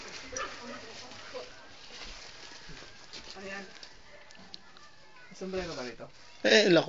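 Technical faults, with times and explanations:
No technical faults can be heard anywhere in this recording.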